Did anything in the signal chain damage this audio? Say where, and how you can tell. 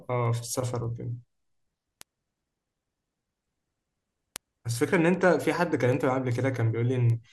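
Yes. The damage happens at the digital interconnect, where a receiving device reads the stream on an unlocked clock. From 0.26 s to 7.30 s the speech carries word clock ticks: sharp single-sample clicks of uneven strength, about five per second, around forty in all. That steady rate fits two clocks drifting roughly 100 ppm apart, each slip dropping or repeating one sample. Buffer dropouts would leave audible gaps at irregular times, not evenly spaced ticks.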